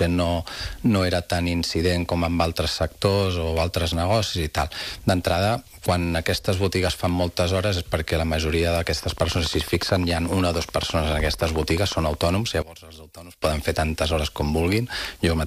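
From 9.03 to 12.29 s a steady ticking runs over the sound, regular pops at 13.8 per second, some fifty in all, peaking roughly 5 dB above the audio. This train of clicks likely comes from interference or a faulty connection injecting repeated pulses.

Between 12.62 and 13.42 s the centre of the sound drops away by about 20 dB, leaving a faint residue. One channel inverted is the likely cause: reversed polarity makes the shared content cancel when the channels are summed.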